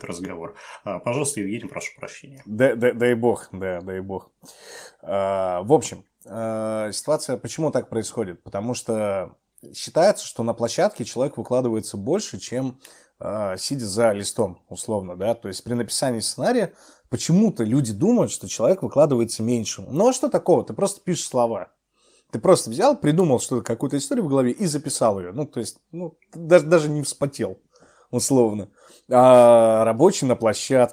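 Speech recording with no audible technical faults anywhere.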